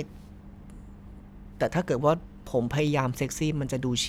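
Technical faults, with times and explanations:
0.88 s and 2.87 s, dropped samples: each is a single sharp, isolated click in the speech, with nothing audibly missing. The likely cause is a tiny gap of a fraction of a millisecond in the sample stream, so the waveform jumps abruptly to a later value.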